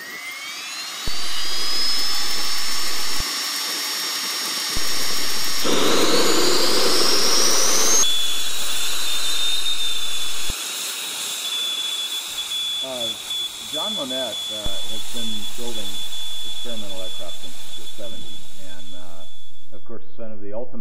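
Low thumps mark each jump of a DC step: at 1.08 s (returning at 3.20 s), at 4.77 s (returning at 10.50 s), and at 14.66 s, holding to the end. The waveform's zero line shifts by about -15 dBFS while the sound continues unchanged.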